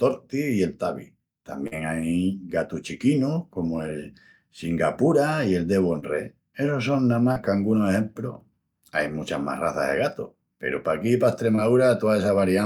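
Short concealed packet loss occurs four times in this speech, at 1.67–1.73, 5.99–6.04, 7.32–7.38 and 11.56–11.59 s. About 40, 20, 40 and 20 ms of audio arrived too late. The decoder bridged each gap by extending the preceding sound, heard as a brief smear or wobble.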